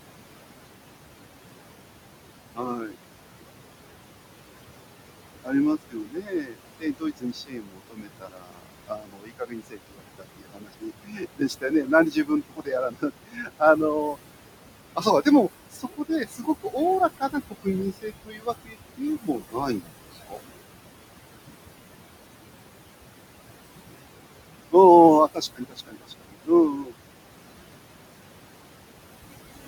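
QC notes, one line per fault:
Throughout, noise suppressor artifacts: the background sinks between phrases and swells under them, as steady noise is pulled down by about 21 dB.
2.54–2.96 s, 5.44–5.54 s, 5.9–14.17 s, 14.96–15.27 s, 15.71–16.77 s, 17.17–20.48 s, 25.34–26.94 s, speech cut by the noise suppressor: soft consonants and endings sound swallowed. The suppressor mistook the quieter parts of the speech for noise and cut them by about 17 to 22 dB, with much of the long 5.9–14.17 s stretch affected.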